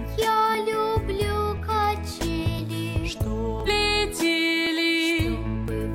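From 0.55 s to 5.68 s there's a steady tick about every 1.02 s, roughly seven in all. These are periodic USB or driver dropouts: something stalls the bus or driver on a fixed cycle, and each time a few milliseconds of audio are skipped outright.

At 3.63 to 3.68 s the sound jumps abruptly forward with a small blip. That's likely a stream segment skipped, where one chunk failed to load and playback just carried on with the next one.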